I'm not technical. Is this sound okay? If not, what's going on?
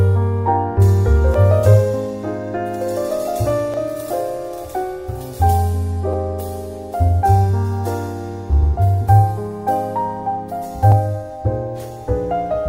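No. Clock drift buffer slips cause a regular click about every 2.4 s, from 1.34 s to 10.92 s, around five times. Two devices likely keep slightly different time, so every so often a tiny sliver of sound, a few dozen samples, gets dropped or repeated.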